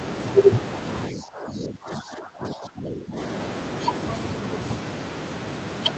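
From 1.12 to 3.17 s the speech dips by as much as about 15 dB, most likely speech suppressed in double talk as the echo canceller ducked both sides.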